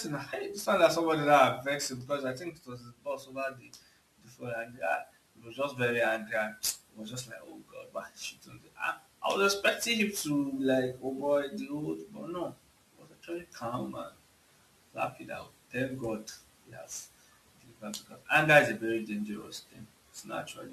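Speech runs the whole way through with sample clock jitter, a gritty hiss riding on the louder, brighter syllables and dropping out in the pauses. The converter's timing wobbles by several microseconds, leaving an error only about 25 dB under the signal.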